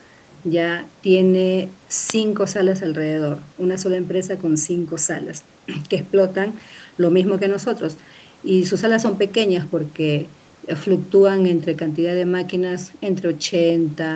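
No technical faults can be heard in this speech, which shows the ordinary band limit of a call, with nothing above 8 kHz, consistent with call microphone processing and an Opus-coded WebRTC call path at a setting that fits about 32 kbps.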